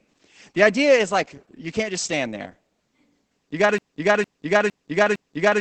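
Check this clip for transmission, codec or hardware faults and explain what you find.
Two faults are present: low-rate voice compression across the whole clip, and a repeating loop that runs from 3.78 s to the end.

Opus voice compression affects the entire clip. The encoder ran in its SILK linear-prediction mode at a wideband setting, and the heavy damage fits a rate of around 10 kbps. With so few bits, the excitation signal is coded coarsely, and nothing survives above 8.5 kHz. The speech comes out muffled, hoarse and slightly robotic, lacking the crisp top end of consonants.

A broken-record loop begins at 3.78 s, right after "you got to", and lasts until the clip ends. The likely cause is a player, encoder or stream stalling and resending the last fragment it held. A 0.46 s piece repeats exactly, back to back, four times. Whatever speech should have followed is lost, and the clip ends on that stuttering repetition.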